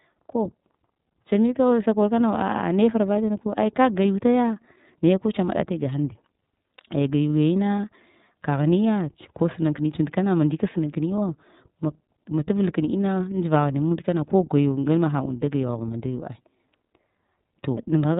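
From start to finish, the speech carries iLBC codec damage. Nothing above 4 kHz survives, so it sounds narrowband and dull. Each 30 ms frame is coded on its own. That gives a rough, slightly synthetic edge. The damage is plainly audible. The sound fits about 13.33 kbps.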